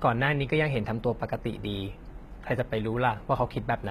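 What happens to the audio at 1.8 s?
At 1.8 s the speech carries the same HE-AAC compression damage heard from start to finish. The treble sounds gritty and metallic, with sibilants turning lispy, and nothing sits above about 14.9 kHz. The likely cause is spectral band replication at a rate that fits roughly 20 kbps, where lower bands are copied upward rather than coded. Unlike a plain low-pass filter, the top is not dull but present and synthetic.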